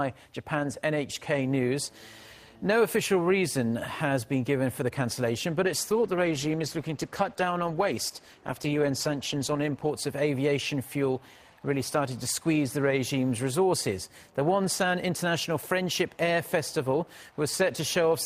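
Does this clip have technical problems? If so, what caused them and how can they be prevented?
Yes. From 5.66 to 9.97 s a call bitrate drop makes the audio coarse and dull. This fits the bandwidth estimate falling and the encoder dropping from about 32 to 14 kbps. Preventing it requires a stable network link with enough headroom, or a higher minimum bitrate floor in the call settings.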